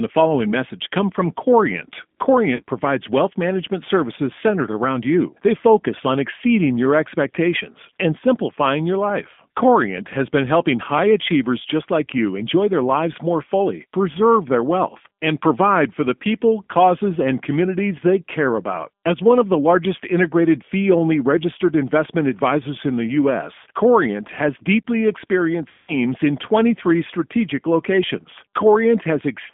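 G.729 codec damage runs through the whole speech clip. The sound behaves like a low-rate 8 kbit/s speech coder that rebuilds each 10 ms frame from a vocal tract filter, a pitch predictor and a handful of pulses. The band is confined to roughly 200 Hz to 3.5 kHz, so everything airy above that is missing. The coding roughness is plainly audible as a grainy, slightly synthetic edge on every syllable.

VoIP packet loss concealed by the speech codec first occurs at 2.55 to 2.62 s. About 40 ms of audio is gone, which fits two lost 20 ms packets. The decoder filled the gap by extending its last pitch and filter settings at falling gain, so the sound smears into a brief buzzy tone or coloured noise that fades. Because each frame depends on the one before, the level and clarity take a moment to recover after the gap.

The second packet loss, at 25.68 to 25.93 s, is far longer. About 200 ms is missing, which points to around ten consecutive packets lost. 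Over that stretch the concealment repeats the last pitch and filter shape while steadily lowering the gain. What is heard is a drawn-out buzzy tone or coloured noise that fades away. After packets resume, the sound remains weak and distorted for a short while as the decoder's state rebuilds.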